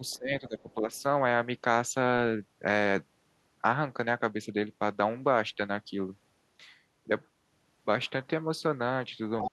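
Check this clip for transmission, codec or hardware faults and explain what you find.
Two echo-control faults appear, both at the edges of the clip.

Speech suppressed in double talk: from 0.0 to 0.89 s the talker's speech sinks and breaks up for most of that span, dropping by roughly 20 dB at its deepest. Near the very end, from 9.49 s to the finish, it falls much further, by around 40 dB. The likely cause is an echo canceller that heard both sides at once, could not tell its own talker from the loudspeaker echo, and turned everything down.

Other side's voice leaking through: faint fragments of a second voice sit under the speech at 0.06 to 0.18 s, 0.6 to 0.74 s and 0.94 to 1.02 s. They are very quiet, about 30 to 40 dB below the talker. At 9.41 to 9.49 s a much stronger scrap comes through, only about 5 dB down. The likely cause is loudspeaker playback reaching the microphone and surviving echo cancellation.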